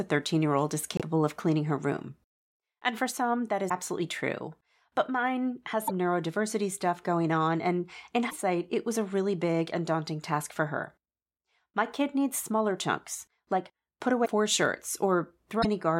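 Speech with six short garbled skips, each about 30 to 50 ms, at 0.97, 3.69, 5.87, 8.29, 14.25 and 15.61 s (the first right after "year old is"). This is likely a broken MP3 bit reservoir: after dropped frames, roughly 24 ms each, the decoder reads the wrong bytes and briefly glitches as it jumps ahead.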